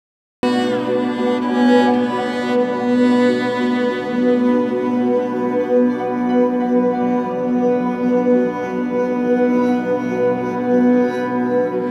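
From 0.0 to 0.43 s there is digital silence. Then the sound appears already in progress: a cut-off start, where capture began late and missed the onset. The waveform shows a flat line jumping straight into the signal, and the spectrogram shows a sharp vertical edge.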